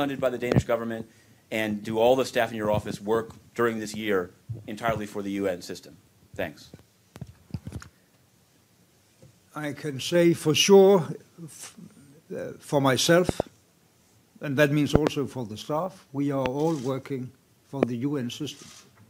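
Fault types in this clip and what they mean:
loud pop: Sharp pops jump far above the sound, roughly 20 dB louder, one nearer 25 dB. Single pops fall near 0.5, 16.5 and 17.8 s, and close pairs near 13.3 and 15.0 s. Each is likely a sudden voltage spike from a switch, plug or static.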